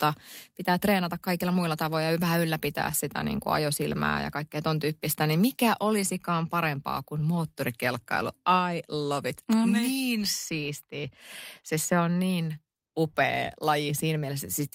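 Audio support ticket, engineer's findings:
Listened through the speech recording in full; nothing stood out, and no findings to log against it.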